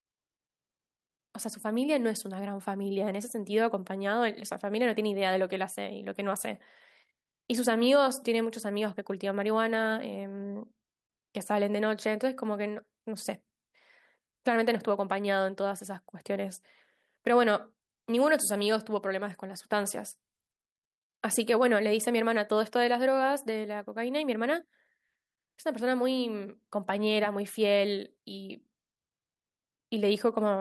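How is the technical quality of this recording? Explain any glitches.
Listening to the recording, nothing stood out as a technical problem or glitch.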